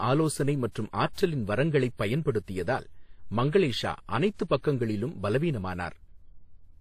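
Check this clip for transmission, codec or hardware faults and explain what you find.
One fault runs through the whole clip: transcoding between lossy codecs. Nothing is present above 14.9 kHz. Two kinds of codec artefact overlap in the speech. The sound points to a low-rate HE-AAC encode, likely re-encoded as WMA. The second encoder spent bits copying the first one's damage and added its own.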